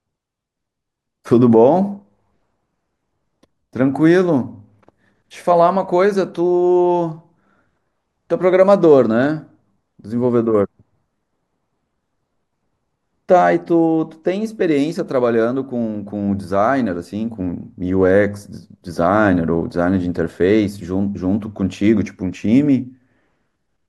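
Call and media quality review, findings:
No findings from the call and media quality review: no fault is audible anywhere in the speech.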